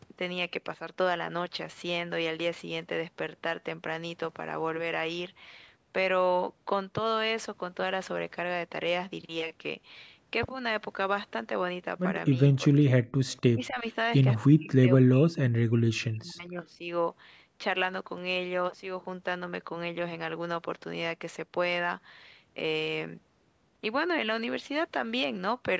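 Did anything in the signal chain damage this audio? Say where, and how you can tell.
Yes. At the call-processing stage the echo canceller likely mistook simultaneous talk from both ends for echo, producing speech suppressed in double talk. The speech dips by around 10 dB at 12.31–12.35 s, then harder at 12.55–13.03 s and 13.53–13.86 s, and drops out almost completely at 14.42–15.49 s and 15.68–16.87 s.

An echo leak also comes through from 13.29 to 13.40 s. A canceller at the loudspeaker end likely failed to remove everything its microphone picked up. The result is a brief, faint copy of the speech arriving 249 ms late, roughly 40 dB below the main signal.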